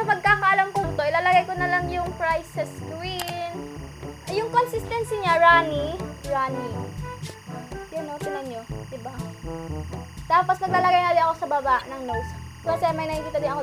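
A steady chirping warble sits behind the sound from start to finish, roughly 25 dB below it and alternating between pitches near 1 and 2 kHz. This is timecode bleed: linear timecode running at 23.976 frames per second has leaked in from a neighbouring track or cable, its square wave flipping between those two tones.

At 0.80 to 0.84 s and again at 11.79 to 11.82 s, a brief glitch breaks through. These are damaged data in a compressed stream: corrupted bytes made the decoder misread those frames and lose sync, so it searched for the next valid frame header.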